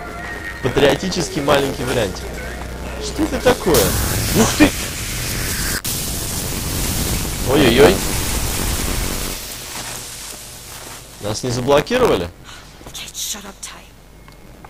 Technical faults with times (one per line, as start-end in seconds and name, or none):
0.00-14.69 buffer tearing